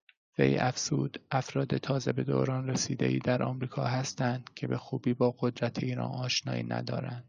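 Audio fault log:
No fault can be heard anywhere in this speech recording. There is nothing here to log.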